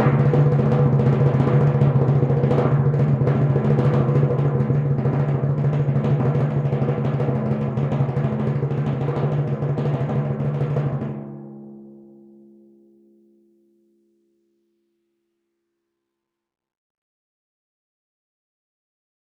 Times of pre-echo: none

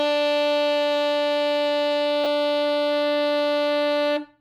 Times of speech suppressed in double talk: none

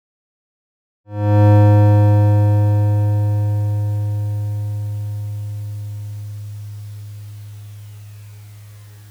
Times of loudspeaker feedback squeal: none

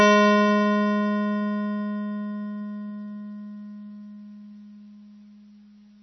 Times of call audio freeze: none

